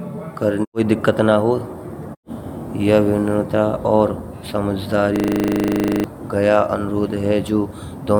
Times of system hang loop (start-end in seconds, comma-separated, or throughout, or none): 5.16-6.04